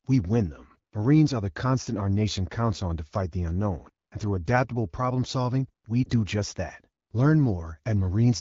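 Lost AMR speech frames at 6.04 to 6.1 s in this speech clip, right after "adaptable problem solving we" and before "just that", cause a brief dip or warble. This fits a single corrupted 20 ms frame in the AMR-WB stream at 12.65 kbit/s. The decoder concealed it by repeating the last good pitch and vocal-tract settings at reduced gain, and the voice comes back weak or rough for a moment.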